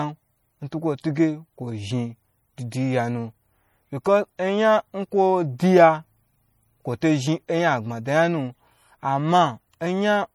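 From start to finish the speech carries plainly audible MP3 compression damage, likely from encoding at a low bitrate, with the artefacts fitting something around 48 kbps. Weak frequency lines drop in and out between frames, giving a watery, swirling texture and metallic chirps on s sounds, while consonant attacks smear. Unlike a simple low-pass filter, the top is not cleanly removed: content still reaches about 21 kHz, and the damage shows as that frame-to-frame warbling instead.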